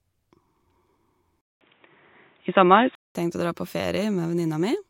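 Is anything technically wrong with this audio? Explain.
Yes. From 1.41 to 3.15 s the speech turns dull and boxy, with nothing above 3.8 kHz, a short silence of about 200 ms at the switch, a noticeable level shift and a faint new noise floor. This is likely the input switched to a poorer, narrower-band device.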